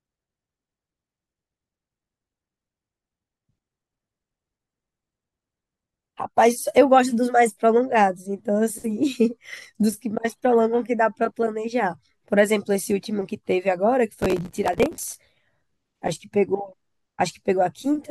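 Speech with processor overload crackle from 14.20 to 15.16 s: dozens of roughly 5 ms buffers miss their deadlines, each replaying a scrap of old audio with hard edges. Unlike a single dropout or click, it's a dense gritty burst that stops once the load passes.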